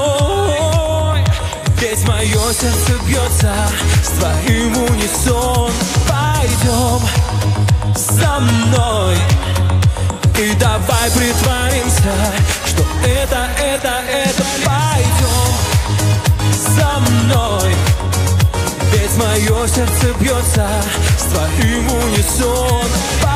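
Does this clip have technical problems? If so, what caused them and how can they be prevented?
No, nothing here points to a technical problem, so there's no cause to track down or anything to prevent.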